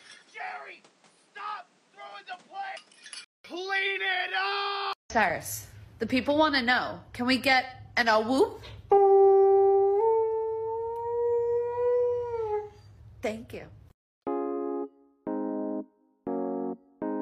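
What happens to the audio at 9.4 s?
Nothing goes wrong at 9.4 s; the audio runs through that moment intact, with no dropout, click, glitch or other fault.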